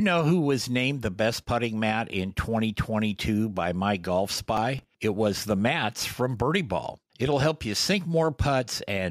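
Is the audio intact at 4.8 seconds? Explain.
No. From 4.57 to 4.89 s a gritty processor overload crackle tears through the speech, as several missed processing deadlines in a row replay hard-edged fragments of old audio, consistent with buffers of around 5 ms. Underneath, the gain swings by about 5 dB, squashing loud and soft parts closer in level. This gain pumping is likely a fast limiter pulling down an input gain set far too high.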